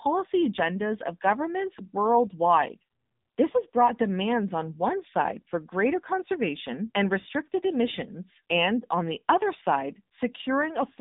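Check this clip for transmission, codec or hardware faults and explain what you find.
One fault runs through the whole recording: the AMR narrowband mobile codec. Nothing above 3.8 kHz survives, and the line passes roughly 200 Hz to 3.7 kHz. The speech is rebuilt from a vocal-tract model fed by sparse pulses. Coding damage is heavy, which fits a low 6.7 kbps mode. The result sounds thin, buzzy and synthetic.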